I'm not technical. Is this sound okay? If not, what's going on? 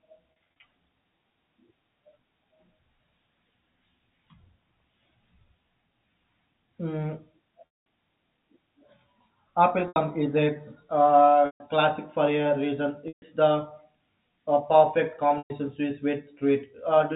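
No. The speech has brief glitches from packet loss with pitch repetition: bits of the signal went missing, and the receiver filled each gap by repeating the last sliver of voice. The shortest gaps give a short, buzzy held sound; the longer ones fade into silence before the speech comes back. It happens at 0.59 s, 7.66 to 7.86 s, 9.88 to 9.96 s (just before "is a"), 11.46 to 11.60 s (just before "classic for a reason"), 13.08 to 13.22 s (just after "classic for a reason"), and 15.38 to 15.50 s. The muffled telephone-style sound comes from ordinary phone-line coding, not from these faults.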